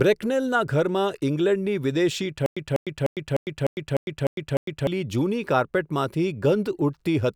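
Stutter with silent gaps, 2.46 to 4.87 s: a 197 ms fragment repeats eight times every 301 ms, separated by 104 ms of digital silence, likely a stalled stream replaying its last buffer, before "જૂની કાર્પેટમાંથી".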